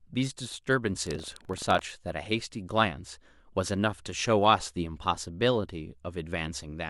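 From 1.02 to 1.83 s the speech picks up a gritty, robotic rattle at about 23.4 Hz. That's buffer tearing: the software writing the ring buffer and the hardware reading it have drifted out of step, so they cross each period. A small slice of every buffer plays audio from about a tenth of a second earlier, with hard joins either side. The buzz rate fits a 2048-sample buffer.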